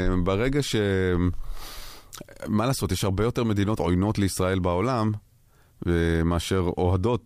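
Hard clipping runs through the whole speech clip, from start to end. The signal was pushed about 1 dB beyond what one stage in the chain could pass, so only the tallest peaks, a tiny fraction of the waveform, were sliced flat. Those squared-off tops add harmonics high in the spectrum. With the overload this slight, the damage is heard as brief crackle on the loudest syllables, not as continuous fuzz.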